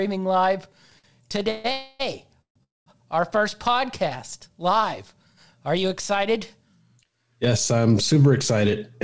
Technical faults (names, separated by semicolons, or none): repeated stalls (stutter); call audio freeze